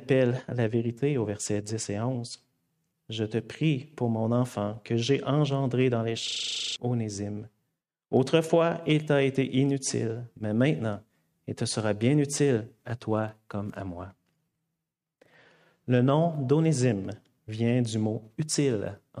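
From 6.28 to 6.76 s there is a system hang loop: the host or driver stalled while the audio hardware kept replaying one 40 ms stretch of its ring buffer, twelve times. It sounds like a rigid 25 Hz buzzing stutter, and roughly half a second of sound is lost.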